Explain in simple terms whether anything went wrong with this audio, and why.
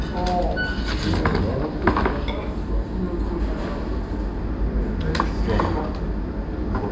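Throughout, the sound runs slow and low, a wrong sample rate fault. It plays at about 0.73 times normal speed and drops about 5.5 semitones, which fits audio made at 22 kHz played back at 16 kHz. Unlike a simple slowdown or pitch change, speed and pitch fall together.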